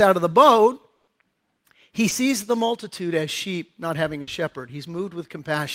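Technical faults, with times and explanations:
0.95–1.09 s, burst of packet loss: about 120 ms of consecutive audio failed to arrive in time. The receiver stretched the last received sound across the hole while fading it, giving a held buzz or hiss, then resumed later with that 120 ms gone.
2.09–2.13 s, short concealed packet loss: roughly 20 ms never reached the decoder. The gap was patched by extrapolating the preceding sound, from its pitch or as shaped noise, and blended back in, leaving a brief smear or wobble where a short sound can drop out.
4.21–4.29 s, burst of packet loss: a shorter run, about 60 ms, went missing. The receiver again prolonged and attenuated the last sound through the gap, so a fading buzz or hiss is heard before playback picks up with those 60 ms skipped.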